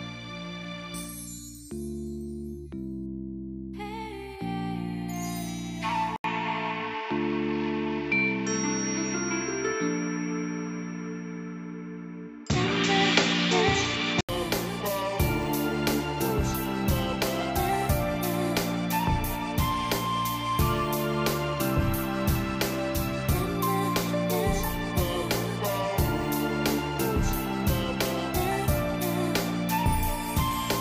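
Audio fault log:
6.16–14.29 s input switched to a poorer device, likely: sound turns dull, spectrogram empty above 7.6 kHz, 80 ms waveform gap at switch, level shifts about 5 dB, faint new background noise.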